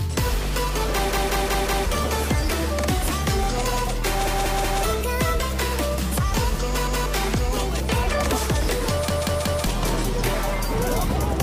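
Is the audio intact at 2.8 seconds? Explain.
Yes, at 2.8 seconds the audio is intact, with no dropout, click, distortion or other fault to be heard at that moment.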